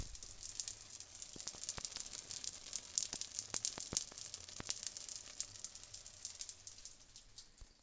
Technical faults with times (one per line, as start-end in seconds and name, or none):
none